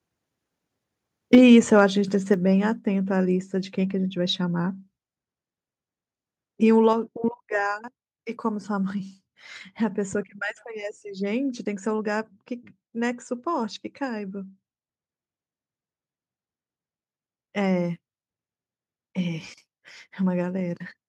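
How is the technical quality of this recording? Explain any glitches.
The recording has two related problems early on: one burst of distortion and then a few sudden drops in level.

Around 1.33 to 1.38 s there's a short, harsh crackle on a loud peak. That's microphone overload, likely from the input gain being set too high. The peak pushes about 4 dB past the converter's ceiling and gets its tops flattened, with roughly one sample in twenty clipped.

At 1.35, 2.34 and 6.93 s the voice and the background both drop at once, by about 4, 5 and 5 dB. That's the microphone volume being stepped down, with the call software likely cutting input gain in single jumps, the first during that overloaded peak.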